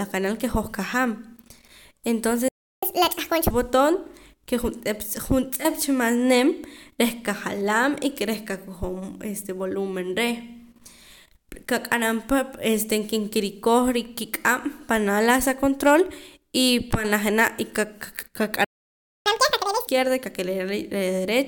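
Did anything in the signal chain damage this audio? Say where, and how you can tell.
Yes, at the playback stage. A playback stall silences the speech from 2.48 to 2.83 s (about 0.34 s) and again from 18.64 to 19.26 s (about 0.61 s). Both cut off mid-flow, and the speech resumes where it left off. The likely cause is the player's buffer running dry or its thread being blocked. On a waveform each gap is a flat line with abrupt edges. A spectrogram shows a clean vertical blank band.

Each stall is followed by catch-up at higher speed, as the player resamples its backlog to regain lost time. From 2.83 to 3.51 s, running into "botoon ke juntz'ep juntz'ep", the speech plays at 1.5 times normal speed, pitched up roughly seven semitones. From 19.26 to 19.87 s it runs at twice speed, about ten semitones high. On a spectrogram the harmonics and formants sit visibly higher and syllables compress, then drop back to normal spacing.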